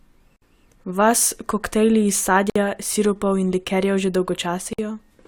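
Gaps at a join of encoded pieces occur at 0.36 s, 2.50 s, between "koktajli iz" and "sirupov in likerjev že", and 4.73 s, after "sirupov in likerjev že". Each is a gap of about 54 to 58 ms where separately encoded segments were joined untrimmed, leaving encoder delay and frame padding. The speech cuts out, with smeared edges, then resumes where it stopped.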